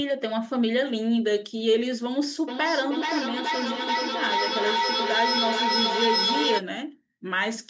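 From 2.48 s to 6.65 s the speech is caught in a feedback echo between two devices. One device plays the call audio aloud. A second device's microphone in the same room picks it up and sends it back. Neither echo canceller removes sound played by the other device. Each word returns roughly every 0.4 s, thinner and ringing, with the band capped at 8 kHz by the call processing. The loudest repeats reach about 0 dB relative to the speech. They pile up instead of fading.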